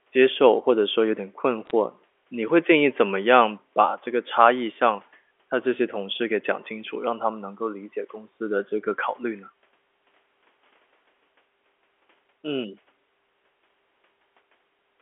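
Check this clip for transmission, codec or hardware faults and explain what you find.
One fault shows up: a short burst of bit errors on a digital phone line, from about 1.66 to 1.71 s. The audio travels as G.711 telephone coding, so you hear the usual band of roughly 300 Hz to 3.4 kHz. In that brief stretch some of the 8-bit samples had bits flipped in transit, at an error rate of roughly a fifth of a percent. Each hit corrupts a single sample, and when a high-order bit or the sign of a loud sample flips, that sample jumps way off the waveform. You get a few sharp ticks, a little crackle sitting on top of the speech, which itself carries on unchanged.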